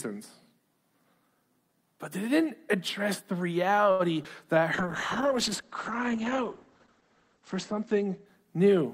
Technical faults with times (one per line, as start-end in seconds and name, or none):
3.91-4.01 short stall from a late packet
4.23-4.26 short concealed packet loss
4.55-5.36 jitter buffer slow-down
4.75-8.94 call bitrate drop